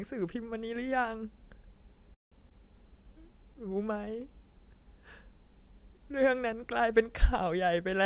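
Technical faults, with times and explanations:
2.14 to 2.34 s, call audio freeze: Packets were most likely held up in transit, so the jitter buffer ran dry and the receiver had to fill about 175 ms on its own. It carried the last sound on only briefly before falling silent for about 160 ms. When the packets arrived, playback resumed exactly where it had stopped. The result is a hole inserted into the sound while nothing of the audio itself is lost.
2.50 to 2.52 s, skip ahead: Here roughly 70 ms of audio was discarded while later packets were already queued. This is the kind of drop a jitter buffer makes when it sheds excess delay after a stall, and here the delay fell by about 50 ms. Only a tiny 9 ms fill bridges the cut, so the sound lurches forward. The two sides are spliced almost directly, with a short piece of the audio gone.
2.87 to 3.63 s, jitter buffer slow-down: Just after the disturbance, the buffer was short of reserve and rebuilt it by repeating single pitch periods and fragments of pauses many times over. 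This added 58 ms across the stretch, so the speech plays at about 93% speed with its pitch unchanged. Sounds in this span come out slightly drawn out, within audio that has no content above 4 kHz.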